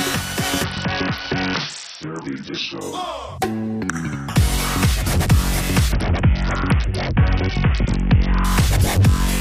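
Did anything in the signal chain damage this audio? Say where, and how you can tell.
Yes. At the codec stage there is a Bluetooth SBC bit pool drop from 0.64 to 2.81 s and again from 5.92 to 8.44 s. The encoder was squeezed onto too few bits, starving the top sub-bands. The treble dulls and gritty noise rises, which fits a bit pool falling from 31 to 6, about 55 kbps.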